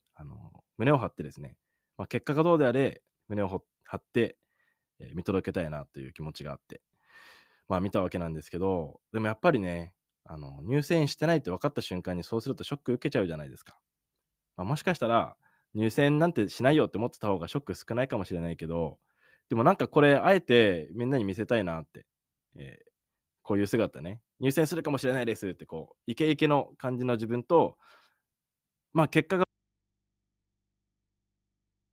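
At 29.44 s the speech cuts off abruptly and never returns, leaving only a faint mains hum far below the speech level until the end. This is an audio dropout to a faint residue, likely a lost signal feeding a still-live, open input.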